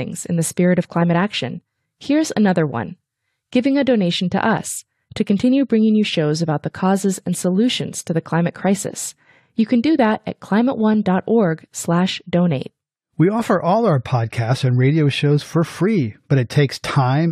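No audible technical faults anywhere in this speech recording; nothing to flag.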